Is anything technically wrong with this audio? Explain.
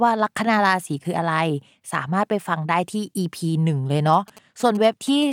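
Yes. From 4.13 to 5.24 s there are GSM signalling bursts: a nearby 2G phone's radio pulses, rectified by the audio circuitry, produce a galloping dit-dit-dit of short 217 Hz buzzes about 20 dB below the speech. Unlike steady hum or an in-call buzz, it arrives in irregular clustered groups.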